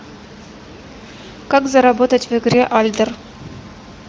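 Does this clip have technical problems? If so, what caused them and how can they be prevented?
No, this speech clip has no technical problems: the room's background noise sits about 24 dB below the speech, and the audio carries nothing above roughly 7.2 kHz, which points to an AMR wideband (HD Voice) link running at a high bitrate with at most faint traces of coding.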